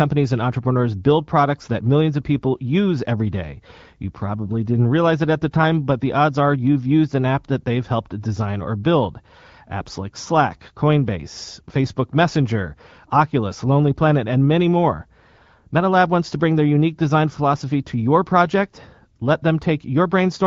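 No technical faults are audible.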